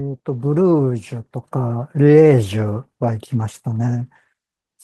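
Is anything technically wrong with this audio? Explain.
No, nothing is technically wrong with this speech audio.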